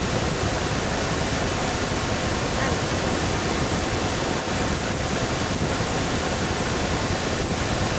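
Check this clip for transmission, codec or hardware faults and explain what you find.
There's one clear problem, and it runs the whole way through: an echo leak. From the start to the end, a delayed copy of the voice comes back about 0.34 s later, only a little quieter than the original, so the speech sounds doubled. The likely cause is a far end on loudspeaker whose echo canceller didn't remove all of what its microphone picked up, so that copy got sent back down the line. The top end stopping around 8 kHz is just the call path's bandwidth.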